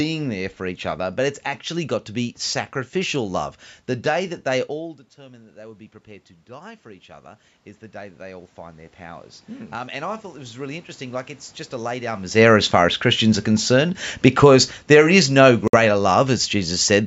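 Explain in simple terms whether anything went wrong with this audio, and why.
Between 6.46 and 11.99 s there is automatic gain rising. The incoming level dropped sharply, so the call's level control slowly turned itself up to compensate. The voice and the room noise behind it swell together over several seconds instead of jumping straight back.

Automatic gain falling follows in two stretches, 12.26 to 12.71 s and 13.23 to 17.03 s. After the talker moves around 12 s, the control finds the input too loud and eases itself down. The speech and its background sink together, the second time by a noticeably larger amount.

At 15.68 to 15.74 s the sound cuts to silence for about 56 ms and then carries on. This is likely a Bluetooth stall, where delayed wireless packets leave the headphones with nothing to play until the missing audio arrives.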